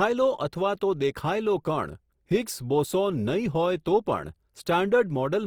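Across the whole speech clip the sound is grainy and rough, with a noisy texture where tones should be clean, yet the top end still reaches about 20.2 kHz. That points to likely Opus compression in music mode, at a rate near 24 kbps, where thin bands are filled with noise. MP3 would instead leave swirling holes.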